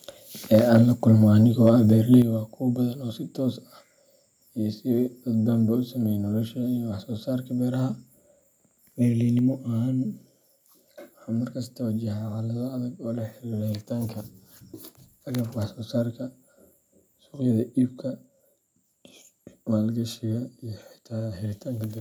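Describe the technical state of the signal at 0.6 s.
At 0.6 s the speech takes on a harsh, crackling edge on its loudest syllable, a brittle rasp riding on the peaks that lasts from 0.54 to 0.77 s. This is microphone overload, likely caused by the input level being set too high. The peaks reach about 2 dB past the converter's limit, so their tops are flattened, and around one percent of the samples in that stretch are cut off.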